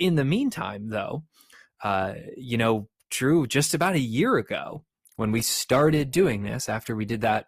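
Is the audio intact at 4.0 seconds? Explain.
Yes, the speech at 4.0 seconds plays through intact, with no dropout, click or distortion at that moment.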